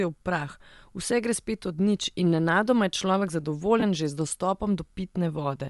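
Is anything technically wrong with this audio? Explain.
Yes, two problems can be heard in this speech.

Bluetooth LC3 compression runs through the whole clip. Its most likely cause is the LE Audio LC3 codec at a low bitrate, consistent with about 48 kbps in 7.5 ms frames. The damage is plainly audible: the speech has a breathy, grainy edge because much of the upper spectrum has been discarded and refilled with noise. On a spectrogram the high band looks speckled and patchy rather than showing clean harmonic structure.

Lost LE Audio frames cause two brief dropouts, one at 2.06 s and a longer one from 3.80 to 3.83 s. The first spans about 7.5 ms, consistent with a single lost frame. The second spans 22.5 ms, which fits three consecutive frames. In each gap the decoder repeated the previous spectrum with scrambled phase, so the voice becomes a short noisy smear. On the waveform the periodic shape breaks into noise-like fill, and on the spectrogram the harmonics blur into a smeared vertical band.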